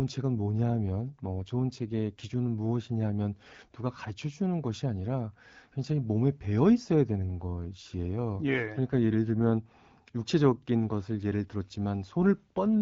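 From 0.36 to 2.20 s and again from 7.25 to 9.55 s, an AMR rate drop makes the speech rougher and more synthetic, consistent with wideband AMR falling from 12.65 to 8.85 kbit/s.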